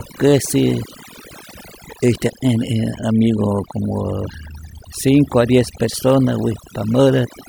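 Right from the start and running the whole way through, you can hear overdone noise removal on the speech. The noise reducer was pushed too hard, so any frequency band sitting close to what it thought was noise got pulled way down or shut off entirely, and the softer parts of the voice got caught in that. The gaps go almost dead silent apart from little twinkly specks.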